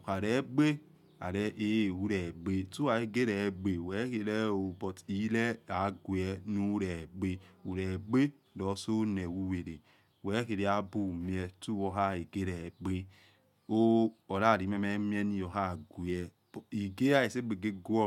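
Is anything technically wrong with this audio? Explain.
No, nothing is technically wrong with this audio.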